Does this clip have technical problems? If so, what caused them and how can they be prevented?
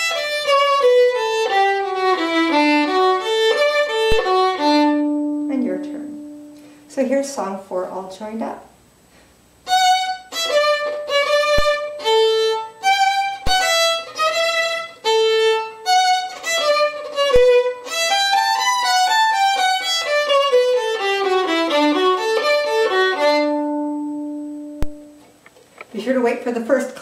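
Yes. Five DC steps occur at 4.12, 11.59, 13.47, 17.36 and 24.83 s. Each time, the waveform's zero line suddenly jumps by about -8 to -9 dBFS and then drifts back as a 5 Hz high-pass lets the offset decay. That abrupt shift and slow recovery is heard as a low thump. Unlike a dropout or digital click, the sound carries on unbroken through each thump, and the disturbance is a baseline move rather than a gap or spike. Preventing it means blocking DC at the input with a coupling capacitor or high-pass filter and keeping converters from recalibrating or inputs from switching mid-recording.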